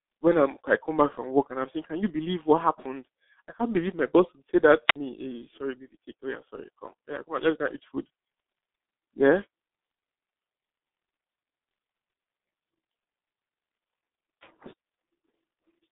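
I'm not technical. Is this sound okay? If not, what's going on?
No. The whole recording went through the G.723.1 codec, an old internet-phone format. Everything above 3.8 kHz is gone, so the speech sounds muffled, rough and smeared. At 4.87 to 4.96 s there is a wireless microphone squelch dropout. The radio link faded, so the receiver muted the sound for about 56 milliseconds.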